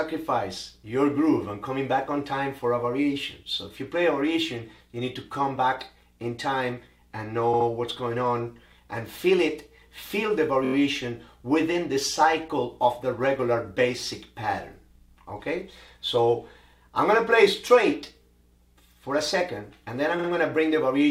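At 7.53 to 7.66 s, a 70 ms block of sound plays three times in a row. This is repeated frames: the same compressed frames were delivered again, so the decoder replays them, with 139 ms added. At 10.64 to 10.73 s, a 23 ms block loops five times, and at 20.18 to 20.27 s a 46 ms block plays three times. Unlike a dropout, nothing goes missing. Identical sound recurs and stretches the timeline.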